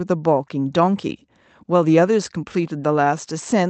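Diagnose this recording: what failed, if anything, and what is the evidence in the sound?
Nothing in the chain seems to have failed: the speech comes through with no fault to point to at any stage.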